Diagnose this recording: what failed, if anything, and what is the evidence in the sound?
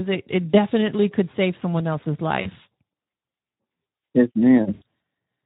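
The damage is at the codec stage and runs through the whole clip. It is Speex, and the hoarse, noisy speech fits a low bitrate of around 11 kbps. Too few bits go to the excitation, so on a spectrogram the harmonics look smeared, with noise filling the gaps between them.

VoIP packet loss concealed by the speech codec happens at the network stage, at 0.49–0.55 s, 2.41–2.48 s and 4.73–4.82 s. The decoder fills about 40, 40 and 80 ms by repeating its last pitch and filter. The spectrogram shows frozen, flat harmonics there, and the waveform shows the level fading frame by frame.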